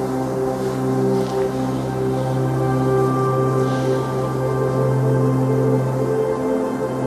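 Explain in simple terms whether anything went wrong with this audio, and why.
Nothing went wrong here.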